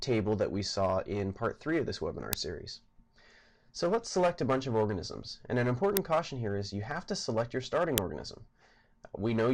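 Three tiny, harsh cracks cut through the sound at 2.33, 5.97 and 7.98 seconds, each gone in about 1.3 ms. That's an uninitialised buffer: a block went out to playback before any audio had been written into it, so whatever junk was sitting in that memory got played as samples. The length of each crack fits a 64-sample buffer, which is why they're so brief.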